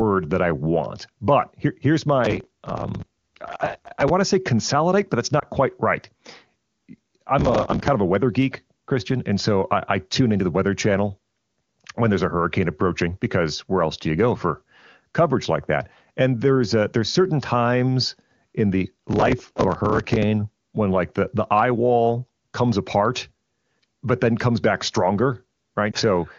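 From 2.25 to 4.10 s, between "want but here here's" and "to say consolidate but", processor overload crackle tears through the speech. The processor misses many deadlines in a row, each replaying stale audio from a buffer of around 5 ms. The result is a gritty, continuous crackle rather than a single dropout. At 5.39 to 5.44 s one lost AMR speech frame, 20 ms long, causes a soft, smooth dip where the decoder bridges the gap with fading sound instead of hard clicks. The crackle returns from 7.39 to 7.88 s, just before "of a weather geek", and again from 18.96 to 20.23 s, between "certain times in the" and "when like the the". A second single lost frame gives another brief muted dip at 25.92 to 25.96 s.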